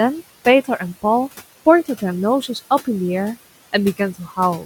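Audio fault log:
Throughout: noise suppressor artifacts. The suppressor pulls the steady background down by about 16 dB, frame by frame, so the room noise, sitting about 17 dB under the speech, drops away in the gaps and swells back beneath speech.
4.14–4.38 s: speech cut by the noise suppressor. Near the end the suppressor mistakes part of the speech for noise and turns it down with the background, by as much as about 11 dB over roughly a tenth of a second, so that stretch sounds swallowed and faint.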